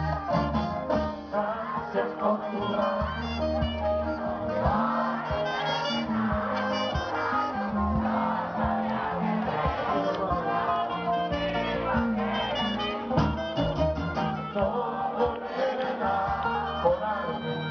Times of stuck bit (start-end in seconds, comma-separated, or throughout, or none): none